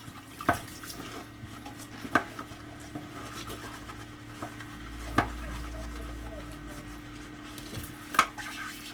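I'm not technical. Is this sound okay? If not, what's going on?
No. Opus compression is heard from start to finish: the sound is rough, grainy and noisy throughout. This is likely the cause. Short of data, the encoder keeps each frequency band's overall loudness but fills in fine detail with copied or noise-like material, so clean tones turn gritty.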